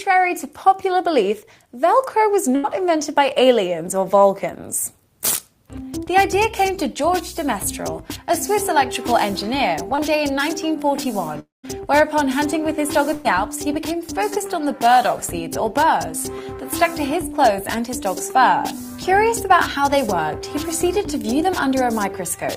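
At 2.55 to 2.65 s the sound is held as a fading buzz or hiss, then jumps ahead. This is a burst of packet loss: 80 ms never arrived, and the receiver stretched and faded the last sound over the gap.

From 9.95 to 10.00 s there is a brief smear or wobble. This is short concealed packet loss: about 20 ms failed to reach the decoder in time, and the receiver continued the prior sound before blending back into the real audio.

From 11.40 to 11.65 s the sound trails off into a fading tail, then goes silent for about 160 ms before resuming further on. A long network dropout is the likely cause, with about 240 ms lost and nearly all of it covered by concealment that faded to silence.

At 13.13 to 13.26 s the same fading hold returns, without a silent stretch. This is another burst of packet loss: 120 ms missing, with the last sound continued and faded across the gap before the audio resumes.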